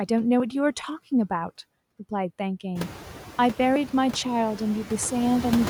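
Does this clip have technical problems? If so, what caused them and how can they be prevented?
Yes. Noise suppressor artifacts run through the whole speech clip. Frame by frame, the suppressor pulls down the bands it judges to be steady noise by about 8 dB. The background therefore sinks in the gaps between words and comes back up underneath them. This is more noticeable after the room noise rises, by about 18 dB, at around 3 s. On a spectrogram the noise floor darkens between words and brightens under each word's energy. The waveform shows a background floor that pumps with the speech. This can be prevented by lowering the suppression depth, or by reducing the room noise at the source so less suppression is needed.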